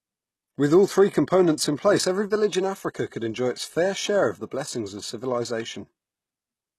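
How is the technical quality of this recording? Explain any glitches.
The recording is degraded throughout by plainly audible coding damage, most likely HE-AAC compression. From start to finish the treble sounds synthetic: sibilants come across gritty and lisped, with a metallic sheen on the upper speech harmonics. This points to spectral band replication, where only the lower band is truly coded and the top is patched from copied lower bands, which fits a low bitrate around 16 kbps. On a spectrogram the high band shows repeated, blocky texture that does not continue the harmonics below, and nothing appears above about 12.3 kHz.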